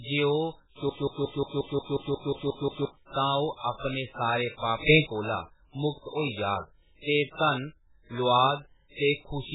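From start to finish the speech sounds watery and swirly, with heavy smearing of consonant onsets and no content above 3.8 kHz, so everything sounds muffled and hollow. This is MP3 compression, likely at a very low bitrate, in the region of 8 kbps. Starved of bits, the encoder discards weaker frequency lines, which then flicker in and out between frames, and it removes the treble above a fixed cutoff.

From 0.89 s to 2.85 s, a fragment of about 179 ms plays 11 times in a row, each time identically, producing a stuttering broken-record loop. The playback or stream likely stalled and kept re-sending the last buffered chunk. Whatever should have been heard in those two seconds is gone.

Right after "अपने सारे", at 4.88 s, the level jumps by about 12 dB, and it stays shifted until 5.07 s. Speech and background noise change together. This sudden gain jump likely comes from a digital gain change applied instantly from one sample to the next, with no ramp.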